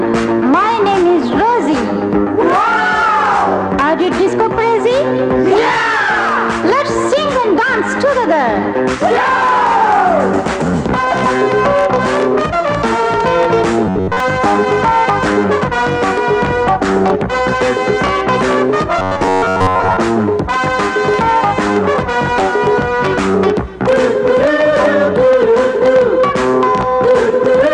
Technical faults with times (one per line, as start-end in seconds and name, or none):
13.87-14.20 robotic sound from repeated short buffers
18.99-19.97 robotic sound from repeated short buffers